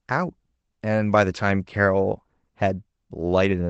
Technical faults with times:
none

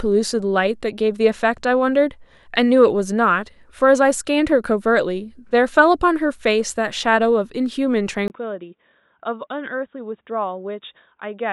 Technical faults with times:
8.28-11.53 input switched to a poorer device

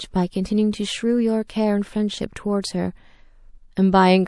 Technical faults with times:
0.00-4.27 MP3 compression
1.48 pre-echo
2.62-2.64 pre-echo

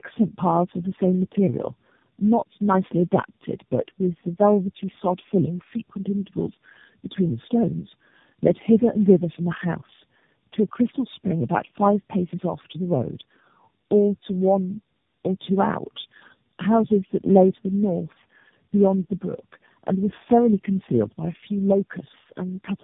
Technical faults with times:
0.00-22.83 tandem speech coding

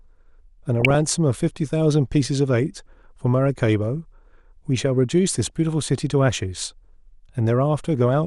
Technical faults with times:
0.00-8.26 MP2 compression
0.76-1.07 DAB burbling
5.46-5.50 DAB burbling

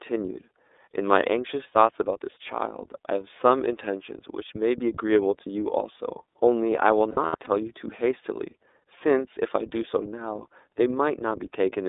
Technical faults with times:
0.00-11.88 iLBC codec
7.11-7.47 lost iLBC frames

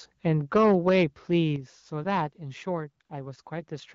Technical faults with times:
1.56 microphone volume stepped down
3.05-3.09 AMR comfort noise
3.43-3.45 AMR comfort noise

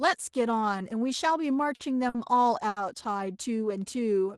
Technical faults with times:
1.75-1.82 short stall from a late packet
2.09-2.17 short stall from a late packet
2.68-2.79 short stall from a late packet
3.65-4.37 jitter buffer slow-down

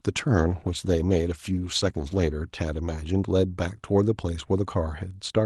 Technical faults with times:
0.39-2.39 call bitrate drop

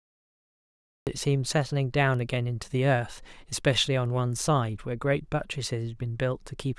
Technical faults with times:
0.00-1.07 cut-off start

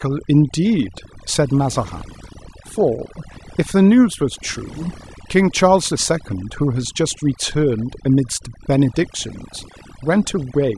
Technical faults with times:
0.00-10.78 overdone noise removal

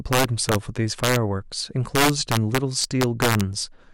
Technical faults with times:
0.00-3.94 integer overflow

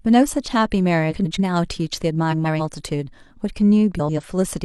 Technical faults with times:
1.11-1.39 frames out of order
2.31-2.61 frames out of order
3.99-4.20 frames out of order

